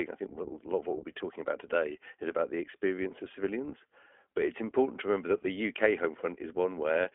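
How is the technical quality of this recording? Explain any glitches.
The quality is limited by low-bitrate voice coding across the whole recording. The speech passed through the iLBC codec, which codes each short frame on its own, here consistent with 20 ms frames at 15.2 kbps. Nothing above 3.6 kHz survives, so the speech sounds narrow and telephone-like, with a plainly audible rough, synthetic edge.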